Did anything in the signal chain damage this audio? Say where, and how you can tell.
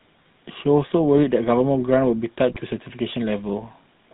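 Yes. The codec stage is at fault: the whole clip went through the GSM full-rate codec, and the damage is plainly audible. Nothing reaches above 4 kHz, and the speech has a constant buzzy, gravelly roughness. That fits a 13 kbps coder that rebuilds speech from a vocal-tract model driven by sparse, regularly spaced pulses.

The network link also added GSM bit errors from 2.53 to 2.62 s. During that stretch the sound breaks into squawks, pops and a gargling texture. The burst lasts about five 20 ms frames, and the damage fits roughly 1.7% of bits flipping. Corrupted filter, pitch or gain values then warp the spectrum or make the level jump, frame after frame through the burst.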